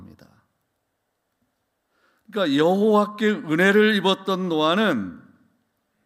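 A speech recording with nothing technically wrong to report, so there are no times or causes to give.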